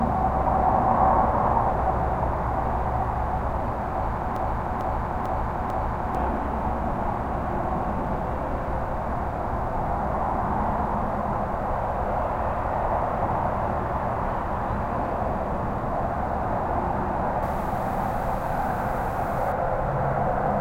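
From 4.36 to 6.15 s there's a broken-record loop: a 446 ms slice plays back to back four times, so the sound stutters on the spot. The likely cause is the player or stream stalling and resending its last fragment, and whatever should've played there is lost.

Then from 17.43 to 19.52 s it's pre-emphasis left on. The treble boost follows the FM 50 µs curve, about 11 dB up at 10 kHz against 1 kHz, with no matching cut afterwards, so it sounds thin, glassy and hissy.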